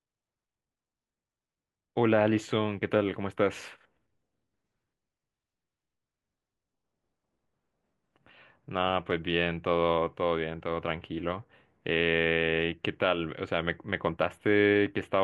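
No technical faults can be heard at any point in the recording, and the signal stays intact throughout.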